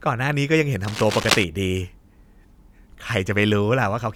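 From about 0.85 s to 1.45 s there's a burst of cable scratch noise, a dense, uneven rustling and crackling laid over the speech for a bit over half a second. It sits only a little below the speech. The likely cause is a worn cable, connector or control being moved, with its contact resistance jumping around rapidly and pushing those ragged noise bursts straight into the signal.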